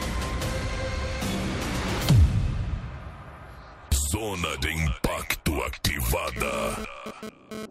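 Right near the end, from about 6.36 to 7.66 s, a GSM phone buzz cuts in: a hard, raspy drone at roughly 217 Hz, thick with harmonics and sitting about 8 dB under the programme. It's a 2G handset nearby firing radio bursts at that rate, which the audio circuitry rectifies into sound. The way it arrives and drops out in a short stretch rather than running steadily suggests the phone was likely moving data.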